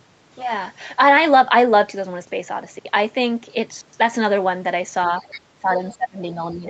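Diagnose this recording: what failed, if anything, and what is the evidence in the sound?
The trouble sits in the call processing, specifically the echo cancellation. There's other side's voice leaking through in two short scraps, from 5.23 to 5.41 s at roughly 20 dB under the talker and again at 5.91 to 5.95 s, quieter still at around 30 dB down. What's happening is most likely that the far end was playing out of a loudspeaker, the mic picked it up, and the canceller didn't fully subtract that estimate, so bits of it slipped through.

Right after that, from 5.55 s to the end of the clip at 6.69 s, the talker gets pushed down, with the deepest dip around 20 dB. That's speech suppressed in double talk, likely the canceller seeing both sides active at once, failing to tell the near voice from the loudspeaker echo, and clamping down on everything. Note the second leak at 5.91 s lands inside that stretch, so it isn't catching all the echo even while it's ducking the talker.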